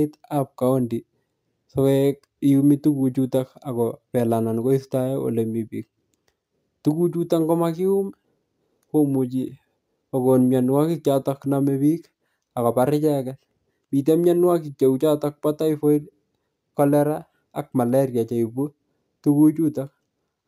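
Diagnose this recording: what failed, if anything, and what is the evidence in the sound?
A faint, bright metallic fizz rides on the speech throughout, rising and falling with its level and sitting above 11 kHz, about 34 dB below the signal. This is imaging from sample-and-hold upsampling at the sample-format conversion stage. The pattern fits a roughly 22 kHz source raised to 44.1 kHz by repeating each sample with no smoothing filter. That leaves a mirrored copy of the spectrum folded between 11 kHz and 22 kHz.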